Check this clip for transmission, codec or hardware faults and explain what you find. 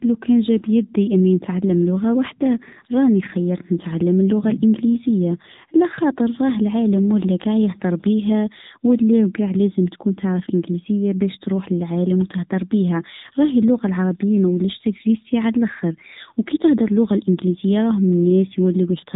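One fault is present, affecting the whole clip.

AMR narrowband mobile codec, throughout: the speech is band-limited to 4 kHz and rebuilt from a vocal-tract model, sounding plainly buzzy and synthetic, which fits a low mode around 7.4 kbps.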